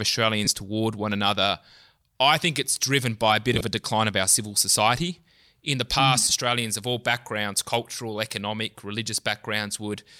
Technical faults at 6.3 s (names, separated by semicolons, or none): lost LE Audio frames